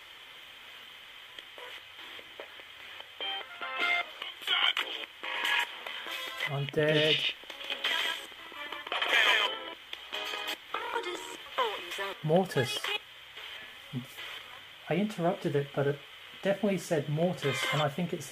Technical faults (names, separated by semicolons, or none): doubled audio track